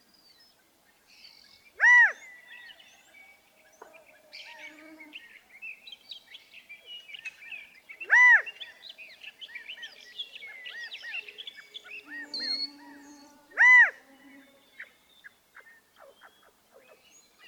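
At about 7.13 to 7.15 s there's a skip ahead. Roughly 0.4 s of audio got thrown away while later material was already queued, and nothing fills the hole, so playback just jumps and the two edges butt together with an abrupt seam.

Right after, from 7.33 to 10.05 s, you get a jitter buffer speed-up. The receiver is trimming tiny pitch-period-sized slivers over and over to shed the extra delay, about 200 ms in total, so the sound runs around 7% fast at unchanged pitch and feels a bit rushed.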